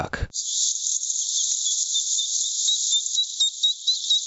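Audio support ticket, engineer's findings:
Level swing around 25 dB throughout, dynamics squashed flat. Gain pumping, likely from input gain set far too high with a fast limiter clamping each peak. Band-limited to 8 kHz by the call path.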